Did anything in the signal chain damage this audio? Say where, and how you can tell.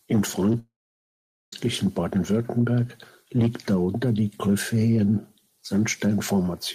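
Yes. At 0.52 s there is short concealed packet loss in the network path. About 10 ms of audio is missing, and the decoder patched the gap by extending the preceding sound. You hear this as a brief smear or wobble before normal audio resumes.

From 0.59 s to 1.53 s the sound drops out for about 930 ms, which is likely a long network dropout. The concealment tail fades quickly, and roughly 0.8 s of silence follows. The audio then returns with that stretch gone.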